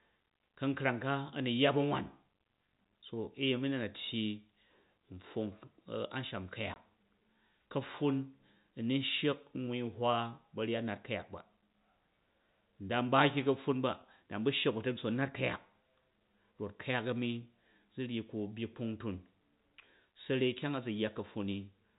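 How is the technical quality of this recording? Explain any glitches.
There's one clear glitch, and it's a packet loss filled with silence at 6.74 s. The sound drops out completely for about 20 ms, which fits a single lost packet, and the receiver just played a gap of silence in its place rather than patching over it. Because the audio cuts to silence and back abruptly, you get a short hole with hard edges. The band-limited telephone sound of the G.711 coding stays steady around it.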